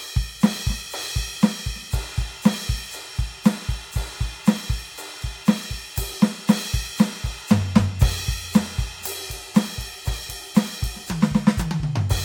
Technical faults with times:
none

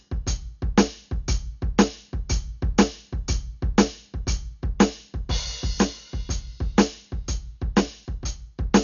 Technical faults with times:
0.00-8.83 Dolby Digital compression

